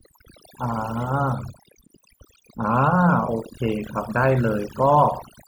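Overdone noise removal runs throughout: aggressive gating strips near-noise bands, leaving a lowered background with twinkling specks, and a patchy, holed spectrogram.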